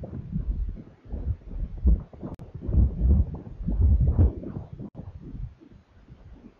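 A gap at a join of encoded pieces opens at 2.35 s, lasting about 48 ms, and again at 4.89 s, lasting about 61 ms. The audio was encoded in separate sections and spliced without removing the encoder's leading delay or the padding on each section's final frame, so that silence survives at each seam. The sound drops out with smeared edges, then resumes exactly where it left off.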